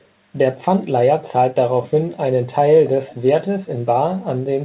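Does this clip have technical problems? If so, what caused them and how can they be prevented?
Yes. From 3.07 to 3.15 s a brief, faint, delayed copy of the speech, well below the main level and trailing it by about 288 ms, surfaces as a short scrap. This is an echo leak, likely from the far end playing the call over a loudspeaker while its echo canceller failed to fully subtract what its microphone picked up, sending the residue back. The sound is band-limited with nothing above 4 kHz, consistent with a narrowband telephone codec on the call path. To prevent the leak, use a headset at the far end or give its echo canceller a properly aligned reference signal.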